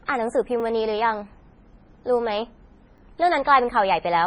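From the start and through to the end, the speech carries heavy MP3 compression damage: nothing survives above 10.4 kHz, and the remaining treble sounds watery and swirly, with metallic chirps on s sounds and smeared consonant onsets. The likely cause is an encoder starved of bits, which fits a rate near 24 kbps, cutting the top band and switching weak frequency lines on and off between frames. Unlike plain low-pass filtering, the band below the cutoff shimmers rather than just sounding dull.

At 0.6 s and again at 2.98 s there is a repeated buffer. A 20 ms block of audio plays twice with a hard join, because fresh data arrived late and the device replayed the last buffer. With a buffer this short, each repeat comes across as a brief click or buzz rather than an audible stutter. No audio is skipped afterward, which separates it from a dropout, where a gap or jump forward follows.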